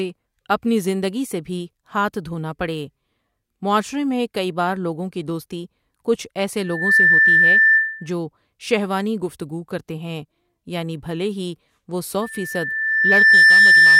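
Loudspeaker feedback squeal at 6.63 to 8.12 s, after "کی دوستی کچھ ایسے". A 1.8 kHz tone swells quickly to about 10 dB above the speech. The microphone is hearing its own loudspeaker. It recurs after "یعنی بھلے ہی وہ" at 12.22 s, building over about a second to about 15 dB and lasting to the end.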